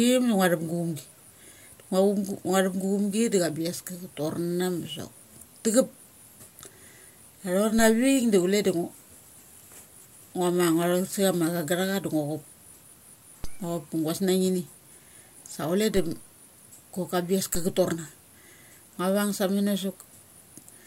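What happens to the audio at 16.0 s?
At 15.97 s there is a DC step. The waveform's zero line suddenly shifts by about -22 dBFS. The offset then drains away slowly, as a 2 Hz high-pass would remove it. You hear a single low thump, while the speech carries on unchanged.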